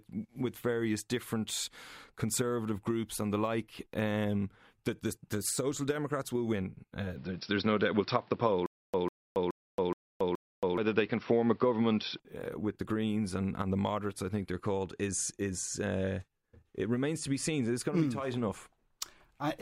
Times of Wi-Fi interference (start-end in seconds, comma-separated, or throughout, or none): none